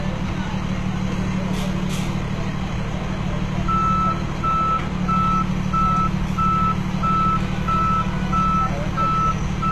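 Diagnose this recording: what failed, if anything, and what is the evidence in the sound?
Codec stage. Throughout the sound, the treble is gritty and metallic, and nothing sits above 12.3 kHz. The likely cause is HE-AAC compression at a rate that fits 16 kbps. Its treble is copied upward from lower bands, so harmonics misalign.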